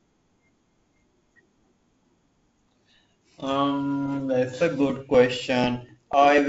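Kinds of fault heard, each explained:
Periodic USB or driver dropouts: the driver stalls every 0.25 s, skipping a couple of milliseconds of speech each time, leaving evenly spaced ticks near the end.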